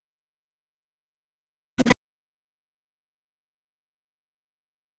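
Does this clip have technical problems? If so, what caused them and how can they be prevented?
Yes. Speech suppressed in double talk hits 0.21–0.66 s, 0.99–3.49 s and 3.77 s to the end. The speech drops by up to about 40 dB, likely because the echo canceller mistook double talk for echo. The waveform shows collapsed envelopes, and the spectrogram shows faded or blank patches. Tuning the canceller's double-talk detector to keep the near-end talker during overlap would prevent it.

The other side's voice leaks through at 1.77–1.88 s as a faint fragment about 25 dB below the speech, likely residual loudspeaker echo. It shows as a weak, separate harmonic trace on the spectrogram. Better echo-path modelling, a lower speaker volume or a headset would prevent it.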